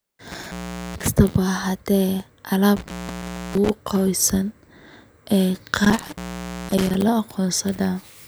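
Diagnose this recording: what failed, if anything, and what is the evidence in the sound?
A loose plug or cable in the analogue wiring, an intermittent contact, opens the signal path three times. The speech cuts out around 0.31–1.08 s, 2.77–3.70 s and 5.84–7.02 s, with crackle at each break and faint hiss during gaps of 0.42, 0.64 and 0.51 s.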